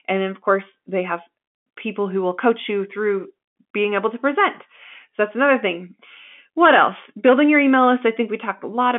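No faults in this speech clip: it is narrowband telephone audio with a 200 Hz to 3.5 kHz line band, nothing above 3.7 kHz, and the faint level-tracking grain of G.711 mu-law coding at 64 kbps.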